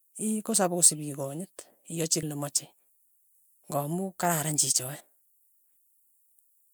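Speech with two brief bursts of damaged data in a compressed stream, at 2.22 s and 5.0 s: corrupted bytes make the decoder misread frames and resync, giving short glitches that show as thin broadband vertical streaks on a spectrogram and abrupt waveform discontinuities.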